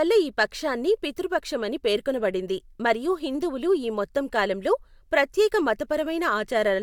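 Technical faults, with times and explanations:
No technical faults can be heard in this speech.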